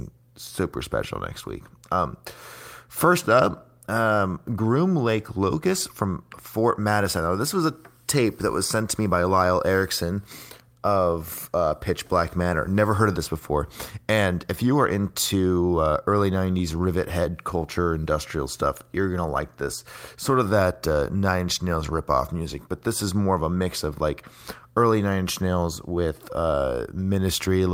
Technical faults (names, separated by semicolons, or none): none